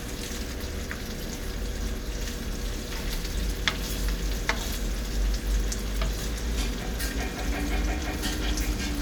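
No technical faults are audible anywhere in this recording.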